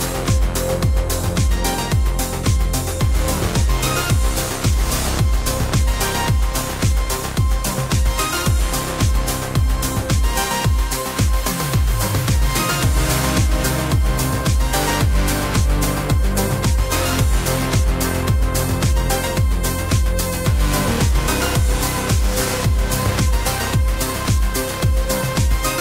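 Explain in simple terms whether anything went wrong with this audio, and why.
Nothing went wrong; no faults can be heard.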